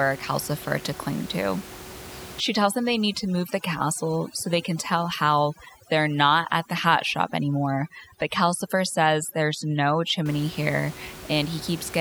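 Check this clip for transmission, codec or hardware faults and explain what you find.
One fault stands out in this speech clip: overdone noise removal, from 2.40 to 10.26 s. A noise reduction stage is working too hard against the room noise, which sits about 16 dB below the speech. It pushes individual frequency bands far down or off whenever they come close to its noise estimate. The background drops away and breaks up into twinkling, warbling specks. Quiet parts of the speech are cut along with it.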